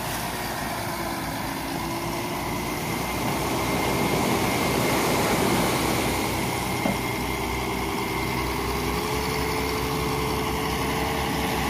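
No technical faults can be heard anywhere in the recording, and the signal holds steady throughout.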